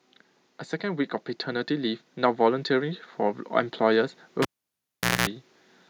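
A speech recording with two faults. From 0.8 to 4.18 s, automatic gain rising lifts voice and background together by about 5 dB, a slowly widening waveform envelope. At 4.42 s, cable pulled and plugged in: a pop, 0.80 s of near-flat silence, a 0.22 s burst of 60 Hz mains buzz as horizontal spectrogram lines, and a second pop at 5.28 s.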